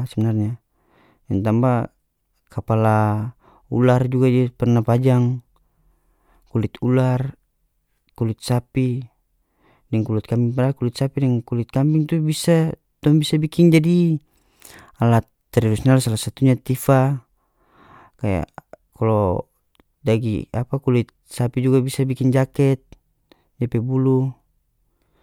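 No technical faults can be heard anywhere in the recording; the signal stays continuous and steady throughout.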